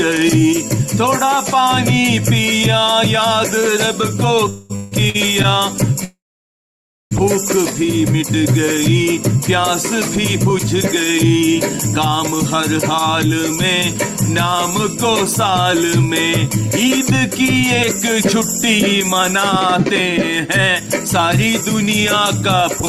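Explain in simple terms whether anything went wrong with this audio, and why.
Three problems can be heard, all from audio arriving late over a call.

A call audio freeze happens twice. At 4.49 to 4.72 s the last sound is stretched for about 0.2 s. At 6.04 to 7.13 s it stretches, then fades to silence for most of that second. The likely cause is delayed packets. Nothing is lost. The audio simply resumes later.

Repeated stalls (stutter) follow right after, from 4.76 to 5.46 s. The audio stops three times, the longest for 160 ms. Each gap is filled by stretching the last sound. About a third of that stretch is filler, so it drags and stutters.

A jitter buffer speed-up runs from 14.5 to 22.6 s. To catch up after the delays, tiny slices of sound are cut out over and over, roughly a fifth of a second in total. Playback runs at 102% speed with the pitch unchanged, below the point where it would sound hurried.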